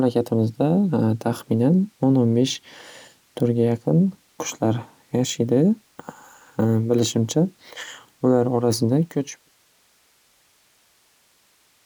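No technical fault is present in this speech recording, and the level tapers off in an even, editor-style fade-out that begins at about 9 s and reaches silence at 9.51 s with no click or hard edge.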